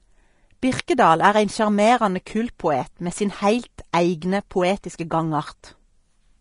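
From start to finish the speech carries the hissy, grainy texture of Vorbis compression, likely at a low bitrate in the region of 34 kbps. The encoder has lowered the high-frequency cut-off and coded the remaining treble so coarsely that fine detail turns into noise, leaving sibilants gritty, tones roughened and consonant onsets smeared. A spectrogram shows a flat ceiling at the cut-off and a mottled, speckled upper band beneath it instead of clean harmonic lines.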